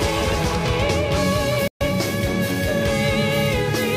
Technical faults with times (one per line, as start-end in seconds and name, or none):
1.68-1.81 digital broadcast dropout